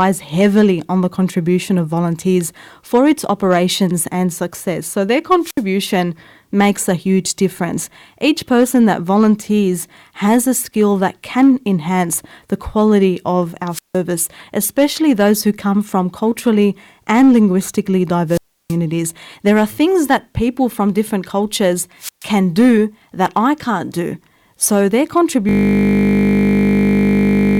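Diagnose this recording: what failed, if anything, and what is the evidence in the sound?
The wireless microphone's analogue radio link faded four times, tripping the receiver's squelch. Each wireless microphone squelch dropout brings a rise of hiss, then near silence: 5.41 s (67 ms), after "enhance the quality of" at 13.71 s (161 ms), after "from culturally and linguistically" at 18.28 s (325 ms), and after "people from different cultures" at 21.99 s (130 ms).

From 25.49 s the driver or host froze while the audio hardware kept cycling its ring buffer. This system hang loop repeats one 20 ms slice exactly until the recording ends, so the sound collapses into a steady 50 Hz buzz, consistent with a 20 ms buffer.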